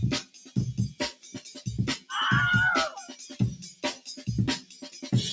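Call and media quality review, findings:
Call and media quality review, findings:

Noise suppressor applied to music or sounds: a speech-tuned suppressor left active on non-speech audio, treating steady tones, ambience and decays as noise. Gain swings of around 15 dB across the clip. Transients pass, sustained parts and tails are pulled down, so the sound pumps and thins. The call microphone path leaves nothing above 8 kHz, as expected.

Sound cut by the noise suppressor at 0.23–0.56 s (about 15 dB down), 1.12–1.63 s (about 15 dB), 3.09–3.37 s (about 11 dB), 3.67–4.24 s (about 13 dB), 4.61–5.0 s (about 12 dB). The suppressor misclassified these stretches as noise and attenuated them harder than the surrounding audio. Held sound sinks and decays are truncated, while onsets stay near full level.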